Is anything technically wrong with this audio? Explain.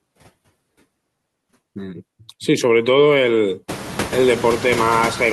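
Yes. Noise suppressor artifacts run through the whole speech clip. The suppressor estimates which frequency bands hold steady noise and turns those bands down frame by frame, here by about 19 dB. The noise therefore drops away in the pauses and comes back up underneath the voice, so the background audibly pumps with the speech. This becomes more exposed once the room noise rises by about 23 dB at around three and a half seconds, ending roughly 11 dB below the voice.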